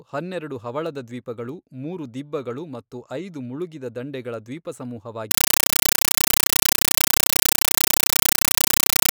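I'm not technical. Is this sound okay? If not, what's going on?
No. From 5.31 s to the end, the speech is replaced by loud, harsh chattering static. This is a compressed stream played as audio. The sound is stored in a packed format, most likely Dolby Digital, which needs decoding first. Here the packed data was sent straight to the speaker as if it were ordinary sound. Each packet becomes an 8 ms burst of noise followed by silence, about 31 times a second. That fast on-off pattern is the chatter.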